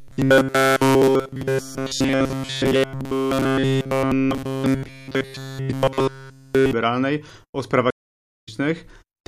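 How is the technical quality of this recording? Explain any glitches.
The technical quality is poor, with two clear glitches in the speech.

From 0.01 to 6.73 s, the speech has robotic sound from repeated short buffers. Nearly all of it is repeated. The likely cause is a starved buffer replaying its last 7.5 ms of audio. That forces a rigid, metallic 134 Hz buzz that only loosely tracks the speech.

At 7.90 s a stream reconnect occurs. The player drops into silence for 566 ms, reconnects and starts a fresh decoder. Audio resumes at 8.49 s, but about 0.4 s further on in the speech. The skipped stretch is simply missing.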